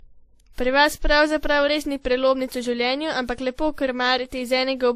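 Speech with transcoding between lossy codecs throughout. Nothing is heard above 15.2 kHz, and layered artefacts point to a low-bitrate MP3 likely re-encoded as WMA.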